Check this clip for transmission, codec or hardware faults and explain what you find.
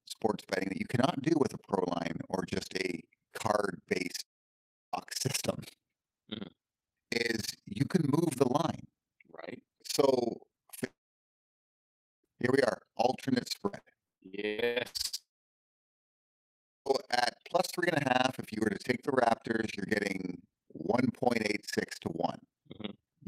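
Five faults of three kinds are present in this speech. One runs through the whole recording, and the others fall in the early, middle and later parts.

Overlap-add ripple is present from start to finish. The level pumps up and down at around 20 Hz, with a depth of about 60 dB. The audio was framed, windowed and rejoined with overlaps that do not sum to a steady gain. Each frame boundary dips the level. The result is a fast, rough tremolo over every sound.

A long network dropout occurs three times: 4.21 to 4.96 s, 10.87 to 12.27 s, and 15.18 to 16.89 s. Each starts with the last sound smeared on as a fading buzz. Silence then takes over for most of the span, roughly 0.7, 1.3 and 1.6 seconds. Sound resumes with that stretch simply gone. The likely cause is a run of audio that never reached the receiver.

Repeated packet loss (robotic sound) covers 13.68 to 15.15 s, just before the third dropout. 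There are eight separate breaks, the longest 178 ms. Each hole is patched by continuing the previous sound, and the next hole follows soon after. Nearly half the span is this patching. It sounds choppy, with pieces missing.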